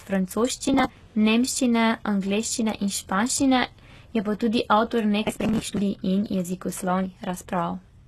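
Right through the speech there's a heavily processed, synthetic-sounding top end: nothing above about 12.3 kHz, and the treble that is there sounds rebuilt rather than captured, with s sounds coming out gritty and lispy. That's likely HE-AAC compression, which codes only the lower spectrum and fakes the highs by copying lower bands upward under a coarse envelope, so the harmonics don't line up across the join. The damage points to a very low bitrate, around 16 kbps.

From 0.67 to 1.10 s there's a burst of processor overload crackle, a gritty tearing riding on the speech. What you're hearing is the processor repeatedly missing its deadlines for small buffers of around 10 ms. Each missed buffer was skipped outright, leaving a tiny hard-edged gap, and a few dozen of these in a row blur into crackle.

It happens again, and lasts longer, from 5.24 to 5.82 s. This stretch has more skipped buffers, and the crackle stops once the load passes.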